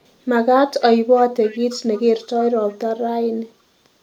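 From 1.44 to 2.03 s there's an echo leak: a faint delayed copy of the speech trailing the original by about 317 ms, sitting well down, roughly 30 dB under the main signal, so you really have to listen for it. It's likely that the far end was on a loudspeaker and its echo canceller let some of the mic pickup slip through, sending that ghost of the voice back down the line.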